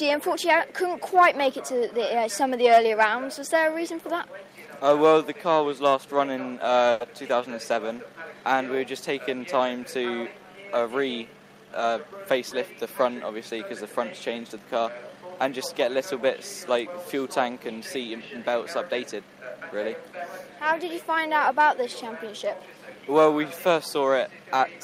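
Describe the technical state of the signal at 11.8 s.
At 11.8 s you're right inside a jitter buffer speed-up, which runs from about 11.72 to 12.75 s. The receiver had built up more audio in its buffer than it wanted, so it caught up by snipping out short chunks a pitch period or so long, over and over, trimming roughly 70 ms in total. Playback runs at about 107% speed with the pitch unchanged, so that second of sound comes across slightly rushed.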